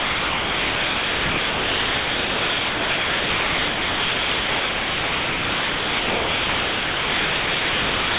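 This is a speech clip from a call, and right through it, from 0.00 to 8.18 s, the speech never comes through; you get steady comfort noise instead. That points to sound dropped by the voice detector: the sender likely took the speech for background and stopped sending. The call path's band limit at 4 kHz shows in that noise.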